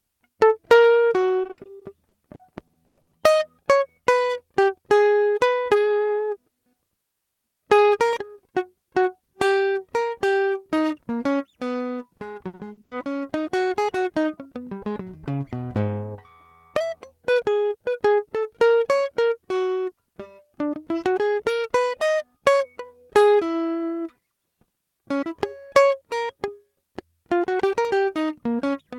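From 1.43 to 3.15 s the music turns choppy and robotic from repeated packet loss. About a dozen gaps, up to 100 ms each, are patched by repeating the preceding sound. On a spectrogram these show as stuttering, smeared blocks. It recurs at 12.17–12.93 s, with five gaps of up to 80 ms.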